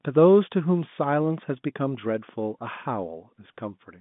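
No technical faults are audible.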